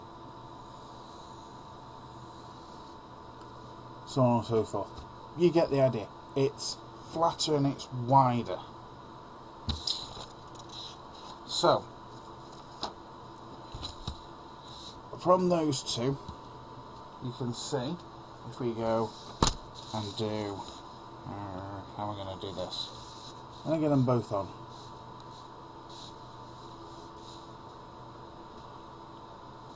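Nothing is technically wrong with this audio clip.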